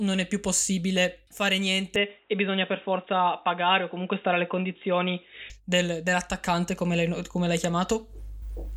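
Speech that turns boxy from 1.96 to 5.5 s, cut above 3.8 kHz with faint new background noise. Likely an input switched to a poorer device, since tone and noise change together.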